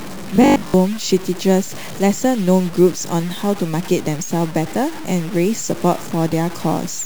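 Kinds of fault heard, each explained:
Low bit depth without dither: All the way through, the speech has a grainy, crunchy edge that moves with the sound, because the error tracks the signal. That points to a coarse word length, likely around 5 bits, truncated with no dither, leaving rounding noise only about 20 dB under the speech. Quiet stretches and the tails of sounds get the roughest, breaking up into sputter.
Robotic sound from repeated short buffers: From 0.36 to 0.74 s the speech turns into a stiff, metallic buzz pinned at 50 Hz. It still roughly follows the speech. That's the signature of the last short chunk being looped while fresh audio arrives too slowly, likely a buffer of about 20 ms, since the buzz sits at one over that length. Most of the real audio in that window is skipped.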